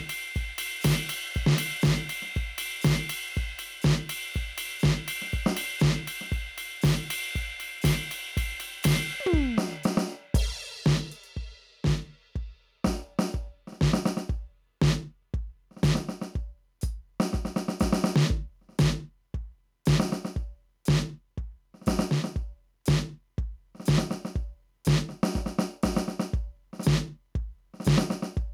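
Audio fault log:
throughout, gain pumping: the gain swings about 5 dB, pulled down under each loud moment, likely a fast limiter reacting to excessive input gain.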